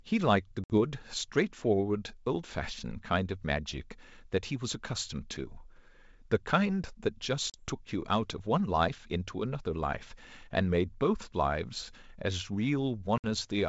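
Packet loss on an ADPCM call strikes three times, at 0.64 to 0.74 s, 7.50 to 7.59 s and 13.18 to 13.27 s, dropping a few packets each time (60, 40 and 60 ms). The G.722 decoder's predictor and step size lose track, so each hard-edged silence ends in briefly distorted speech.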